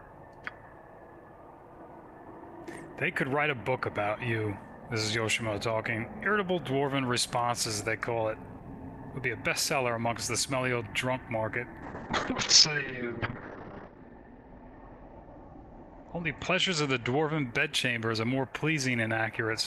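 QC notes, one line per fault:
11.83–17.52 s call bitrate drop: the encoder's rate fell from 40 to 6 kbps, so coarser coding and a 6 kHz bandwidth cap leave the sound rough and muffled.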